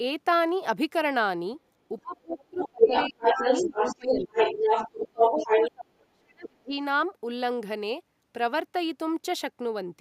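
From 2.02 to 3.42 s the talker's speech is suppressed in double talk. It drops by around 30 dB in patches totalling about a second, likely because the echo canceller mistook the overlap for echo and turned both voices down. On a waveform the envelope shows hollow gaps, and a spectrogram shows the upper bands thinning out.

From 2.29 to 5.72 s the other side's voice is leaking through, a second voice slightly louder than the talker, likely echo the canceller left in the microphone signal. A spectrogram shows a second harmonic pattern overlapping the talker's.

The suppression returns at 3.63 to 4.30 s, dipping about 20 dB for roughly half a second. It hits hardest at 4.95 to 6.77 s, with drops near 35 dB across about one and a half seconds, which leaves visible holes in the waveform.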